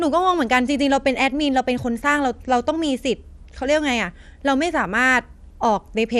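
Throughout the speech the sound is dull and muffled, with a gurgling, granular roughness as upper frequencies flicker in and out. This is likely MP2 compression, where too few bits switch off upper sub-bands and coarsely quantise the rest, consistent with roughly 80 kbps.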